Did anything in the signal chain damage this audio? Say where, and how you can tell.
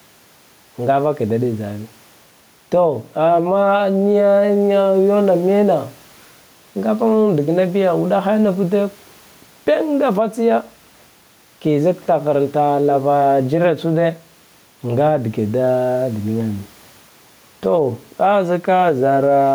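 Yes. Gain pumping runs throughout: the room noise sits about 37 dB below the speech and swells around 5 dB between phrases. The likely cause is excessive input gain with a fast limiter in call processing.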